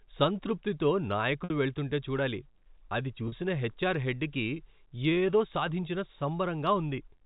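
Packet loss with pitch repetition at 1.44 s (60 ms, before "వెళ్తుంటే చూడాలి అది") and 3.28 s (40 ms, before "హెచ్ఆర్ హెడ్ కి"): the repeated pitch period gives a brief held, buzzy sound over the G.711 band-limited telephone audio.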